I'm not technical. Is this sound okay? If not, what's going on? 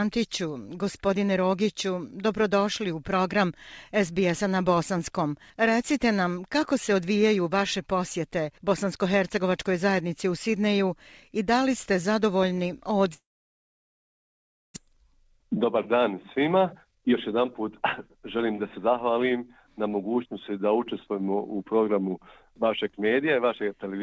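No. There are two problems, one right after the other.

From 13.14 to 14.78 seconds there is a long network dropout, most likely. The sound fades into a short buzz or hiss, then goes quiet for about a second and a half. When it returns, roughly one second of the original audio is simply gone. It never gets played.

From 14.86 to 19.04 seconds you can hear a jitter buffer speed-up. After the gap, the receiver had too much audio waiting. To catch up, it quietly snipped out many tiny pieces. That made the sound run about 14% faster while keeping the same pitch, so it feels hurried. In total, around seven tenths of a second was trimmed away before playback settled back to normal speed.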